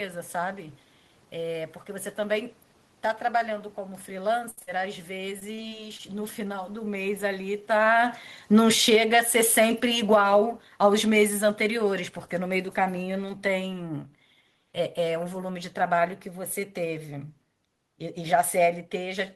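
Two short bursts of repeated packet loss give this speech recording a choppy, robotic edge. The first runs from 4.39 to 4.69 s and is the rougher one: about half that stretch is patched by stretching out the last bit of sound, with the longest hole around 69 ms. The second, from 5.14 to 6.01 s, is lighter. Its gaps are no longer than about 23 ms and cover roughly a tenth of the span. Just after the talker seems to shift position near 7.5 s, the automatic gain control starts falling at 7.67 s. It eases the level down by about 13 dB until 13.77 s, and the room noise underneath sinks right along with the voice, which is the giveaway that it's the gain and not the talker.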